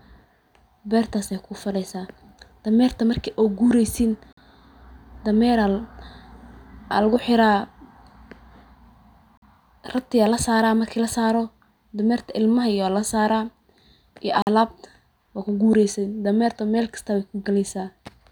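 Gap between chunks at 4.33, 9.37 and 14.42 s: the speech stops dead for about 48 ms each time, right after "marki oo gureysin", then just before "rati aa lasaraa marki" and "alaabta waa kugureysin dameerta". The holes fall at a steady 5-second spacing, which fits audio delivered in 5-second chunks with silence inserted at each join. Nothing is lost, but each join produces a brief, hard-edged dropout in the speech.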